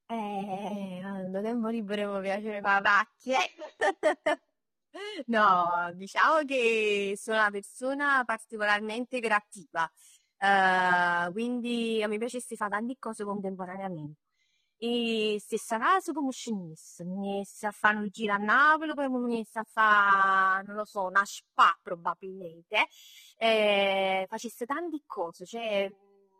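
Speech throughout, and the whole thing carries plainly audible AAC compression damage from start to finish. The top end sounds dull and smeared, and sibilants come out with a warbly, fizzy edge, which is what you get when AAC-LC is squeezed hard. The coder is starving the high bands and lowering its cut-off. The likely culprit is a low-bitrate encode, and the sound fits something around 32 kbps.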